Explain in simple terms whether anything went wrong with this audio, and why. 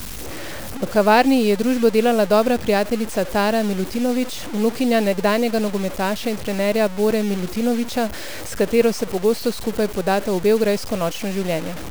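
Yes. From start to finish the speech sounds grainy and gritty, and quiet moments crackle or cut out. The likely cause is low bit depth without dither, with a coarseness that fits about 5 bits. Unlike steady background hiss, this roughness comes and goes with the voice itself.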